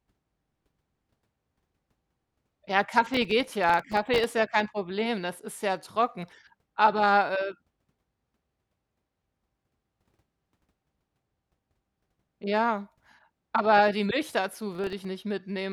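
From 3.06 to 4.24 s, just before "ja kein", processor overload crackle tears through the speech: the processor misses many tiny buffers, likely around 1.5 ms each, in a row, and each drops to silence, giving a gritty crackle. A shorter burst recurs at 14.73–15.05 s.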